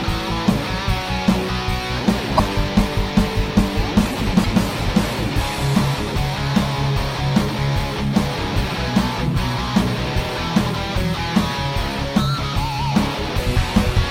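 At 2.37 to 2.40 s and again at 4.43 to 4.46 s the audio jumps forward with a brief glitch lasting about 30 ms, roughly one 26 ms MP3 frame. The likely cause is a broken MP3 bit reservoir: after frames were lost, the decoder borrowed data from the wrong bytes. On the waveform each event shows an abrupt discontinuity.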